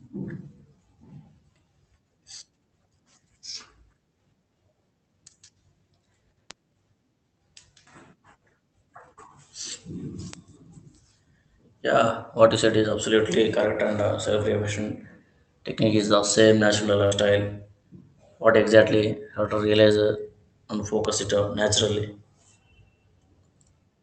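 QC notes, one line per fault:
6.51 s, 10.34 s, 21.05 s, bit error spike: three isolated sharp ticks that sit on top of the speech without relating to it. In each case a single flipped bit throws the sample value off by a power of two for one to three samples (two, one and three here) before it snaps back. A step that brief spreads its energy across the whole spectrum, so each one is heard as a hard, unpitched click rather than as part of the speech.
17.05–17.13 s, burst of packet loss: a short stretch where the speech stops moving forward. For about 60 ms the receiver fills the gap by extending the last decoded sound and fading it down, which gives a held buzz if the last sound was voiced and a dimming hiss if it was not. Playback then picks up with roughly 60 ms of speech skipped, so the speech jumps ahead abruptly. The concealed segment stays within the roughly 8 kHz bandwidth of the Opus call path.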